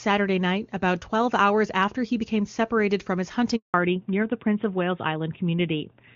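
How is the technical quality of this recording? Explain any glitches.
The recording has two linked glitches around the middle, where the call changes network and loses its wideband sound. Before that, the AMR wideband (HD Voice) codec carries the speech with no more than faint coding damage, which fits a high rate such as 23.85 kbit/s.

From 3.56 to 3.74 s the speech fades out and there are 180 ms of silence. This is a handover gap: no speech frames arrived while the call switched links.

From 3.74 s to the end the speech turns duller and rougher, with nothing above 4 kHz. This is a fallback to narrowband, likely to AMR-NB at 12.2 kbit/s after the handover.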